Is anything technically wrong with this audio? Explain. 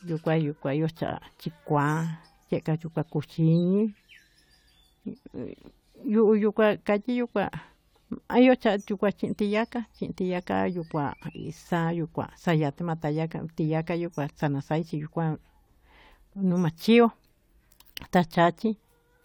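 No, nothing technically wrong can be heard in this speech recording. There is no moment in it where a fault shows up.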